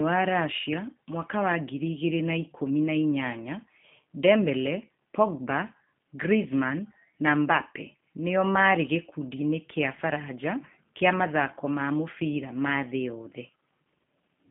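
Speech passed through a G.729 codec throughout, with plainly audible damage: a rough, slightly synthetic quality from the pitch-and-pulse reconstruction, consistent with 8 kbit/s. A spectrogram shows a telephone band of 150 Hz to 3.4 kHz and nothing above 3.5 kHz.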